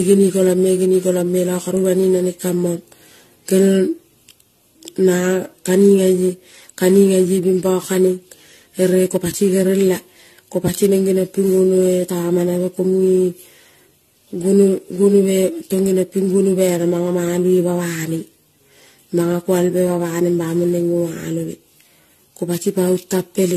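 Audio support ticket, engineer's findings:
Speech swirly, smeared and hollow throughout; consonant attacks blurred; nothing above 14 kHz. Generation loss, likely from around ten AAC-LC decode/re-encode passes, consistent with 64 kbit/s. Each pass requantises on a shifted frame grid, compounding noise and spectral holes.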